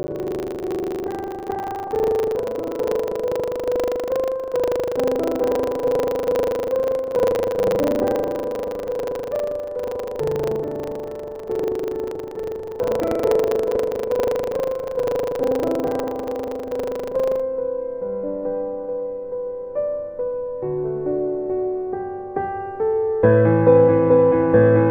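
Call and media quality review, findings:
Buffer tearing, 0.0–17.4 s: continuous robotic 25 Hz rattle, only while signal is present. Write and read pointers of the playback ring buffer are crossing each 40 ms period, so about a fifth of each period replays audio some 70 ms stale. A spectrogram would show broadband vertical streaks every 40 ms.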